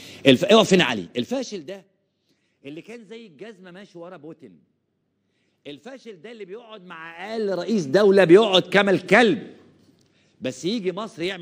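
Zipper noise runs from 0.79 to 1.86 s and again from 6.69 to 8.22 s. The level drops, then rises, by roughly 25 dB in 1 dB steps. Each step clicks, making a fast ticking.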